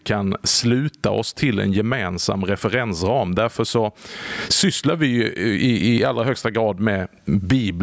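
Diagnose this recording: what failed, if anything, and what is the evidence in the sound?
Gain pumping runs through the whole speech clip, with the level swinging by around 20 dB. Loud and quiet passages sit unnaturally close together, so the sound is squashed. The likely cause is microphone input gain set far too high, with a fast limiter or compressor clamping it down on each peak. The call's own processing, which stops at 8 kHz, is not at fault.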